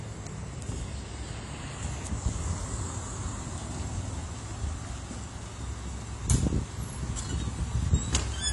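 From start to finish the sound is dull and smeared, with plainly audible codec damage: a fizzy, warbling texture clings to sustained parts, and nothing reaches above 11.5 kHz. This is likely AAC compression, with the character of AAC-LC at a low bitrate, around 32 kbps. Short of bits, the encoder quantises each frame's spectrum coarsely against its hearing model, pulls the cut-off down and leaves gaps between bands, which the ear hears as that swirling haze.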